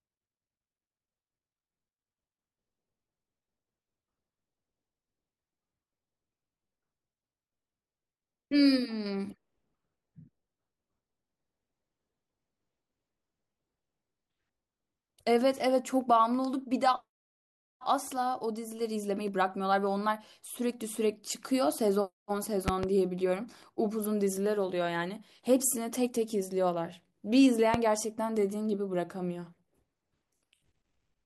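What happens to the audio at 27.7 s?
A single loud pop from 27.74 to 27.77 s, roughly 15 dB above the speech, likely a voltage pulse from a switch or static; speech continues underneath.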